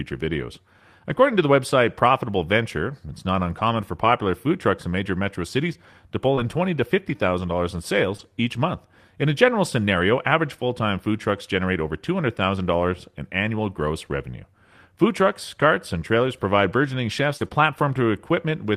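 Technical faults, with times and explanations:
4.03 (between "it's not uncommon for" and "food trucks in major"), 6.37–6.39 (between "metro cities to pull" and "in twenty to fifty"), 8.19–8.21 and 17.40–17.46: lost packet rebuilt from error correction. Single 20 ms packets, and two packets (40 ms) at 17.40, were replayed from low-bitrate backup copies carried in the following packets. There is no gap, only a brief rough, grainy patch, unlike concealment's stretched smear.
6.35–6.39, 8.17–8.21 (after "fifty thousand dollars in", before "each month"), 17.37–17.42 and 17.48–17.52: short concealed packet loss. About 20 ms went missing at each point, and 40 ms at 17.37. The decoder extended the preceding sound and blended back, so these sound like a brief smear or wobble rather than noisy, lower-quality audio.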